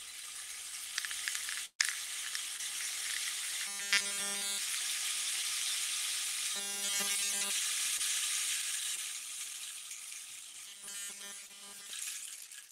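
A burst of packet loss hits at 1.65 to 1.81 s. About 140 ms of the stream failed to arrive in time, and the receiver covered the hole by extending the last sound for about 135 ms while turning it down, including about 80 ms of near silence. The sound decays into a held, fading tail and then picks up further along, with the intervening material gone. Short concealed packet loss occurs at 2.57 to 2.61 s, 7.97 to 8.01 s, 8.95 to 8.99 s and 11.47 to 11.51 s. Each time roughly 20 ms never reached the decoder, which patched the gap for about 17 to 24 ms by continuing the preceding sound and blending back into the real signal, leaving a brief smear or wobble where a short transient may drop out. Robotic sound from repeated short buffers appears at 3.67 to 4.58 s, 6.53 to 7.51 s and 10.67 to 11.91 s, the last span also containing one of the concealed losses. Fresh audio is likely arriving too rarely, so the playback side keeps looping its newest 5 ms slice while the real material is skipped, with essentially all of each span made of repeats. 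That looping stamps a fixed 200 Hz pitch onto the audio, turning it into a stiff, metallic buzz that only loosely tracks the underlying sound.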